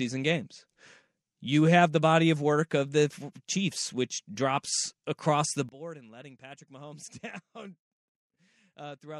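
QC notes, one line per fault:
5.69–9.20 s, one channel inverted: after "which drops across the", the speech falls about 19 dB. Likely a polarity flip, so shared content cancels.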